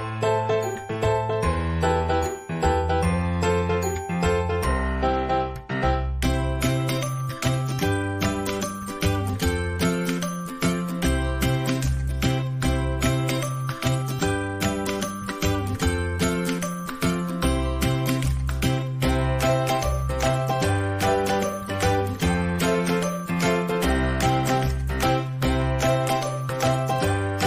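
No technical fault can be heard anywhere in this audio. There is nothing here that calls for a timestamp or a cause.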